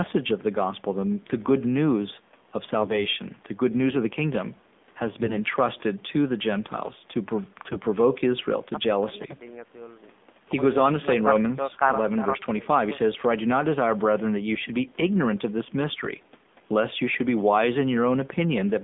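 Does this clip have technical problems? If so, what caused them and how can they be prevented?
Yes. The speech carries AMR narrowband mobile codec damage from start to end. The line passes only about 200 Hz to 3.6 kHz, so the sound is thin and boxy. The codec rebuilds the voice from a vocal tract model driven by a few pulses in each 5 ms. At this low rate, which fits the 7.4 kbps mode, it sounds buzzy and synthetic. To prevent it, carry the call over a wideband codec at a higher rate.

AMR bit errors appear from 5.14 to 5.38 s and again from 7.64 to 7.78 s. Pitch and level hold, but the voice turns hoarse, scratchy and gargly. The radio link flipped less protected bits in the frames, while the checks on the key bits still passed. So pulses landed in wrong places and fine gain and spectrum values went astray. The second burst has a higher error rate, around one bit in ten against a few percent in the first. 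To prevent it, keep the phone on a stronger signal or use a more robust codec mode.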